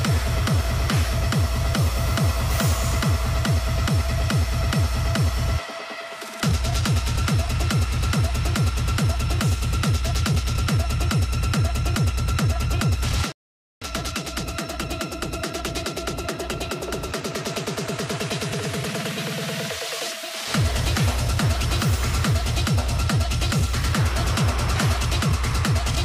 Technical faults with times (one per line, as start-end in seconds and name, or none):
13.32-13.81 playback stall